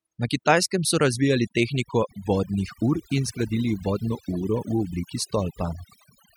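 From start to finish the recording carries overdone noise removal: the denoiser was pushed so hard that individual frequency bands are pulled down or shut off whenever their level sits near the tool's noise estimate. The pauses collapse into near silence sprinkled with twinkling specks, and the quieter parts of the speech are cut along with the noise. A simple gate would mute everything at once; here bands flicker independently.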